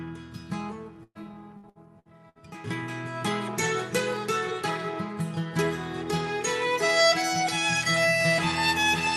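A burst of packet loss hits from 1.03 to 1.18 s. A run of packets went missing or arrived too late, so the receiver stretched the last sound it had across about 116 ms, letting it fade, with roughly 30 ms dropping to silence. When the audio picks up again, about 120 ms of the original has been skipped. The patch sounds like a brief held, decaying smear followed by a small jump forward.

Repeated packet loss (robotic sound) follows from 1.57 to 2.38 s. Four separate gaps, the longest about 62 ms, are each filled by extending the preceding sound, totalling about 244 ms of concealment, roughly 30% of that stretch, with about 240 ms of real audio lost. Because the holes come close together, the sound turns choppy, with pieces missing. It all sits within an Opus call path whose top end stops at 12 kHz and whose character suggests a bitrate around 40 kbps.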